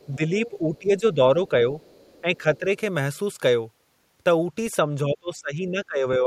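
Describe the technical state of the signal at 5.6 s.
At 5.6 s you're inside a stretch of speech suppressed in double talk, running from 5.05 s to the end. The speech sinks, dropping by as much as roughly 25 dB. The likely cause is an echo canceller that couldn't tell this talker from loudspeaker echo while both sides spoke, so it turned both down.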